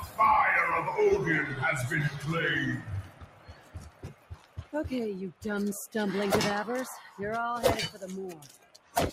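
A speech-tuned noise suppressor left running across the whole clip treats steady sound and decay as noise, so levels swing by roughly 15 dB: attacks come through while sustained parts and tails sink, giving a pumping, thinned-out quality.

Sound cut by the noise suppressor occurs at 0.00 to 0.19 s (about 11 dB down), 2.09 to 2.27 s (about 9 dB), 2.77 to 4.74 s (about 13 dB), 7.03 to 7.19 s (about 7 dB) and 8.36 to 8.96 s (about 13 dB). The long stretch near 3 to 5 s lasts about 2 s.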